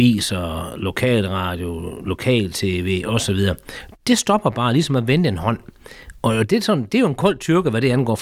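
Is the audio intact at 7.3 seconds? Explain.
Yes, the audio is intact at 7.3 seconds, with no fault at that moment.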